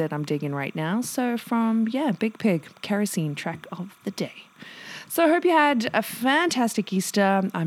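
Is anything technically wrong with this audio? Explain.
Yes. Timecode bleed runs through the whole speech clip. Linear timecode from an adjacent track or cable has leaked into the audio path. The code is a square wave that flips between tones around 1 and 2 kHz as it encodes each bit, framed at 30 frames per second. It sits roughly 35 dB below the speech, audible as a constant thin chirping warble underneath.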